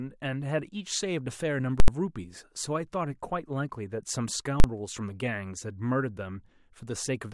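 Invalid numbers at full scale: a calculation produced invalid values that pinned the output to maximum level at 1.8–1.88 s and 4.6–4.64 s, each heard as a loud bang through the speech.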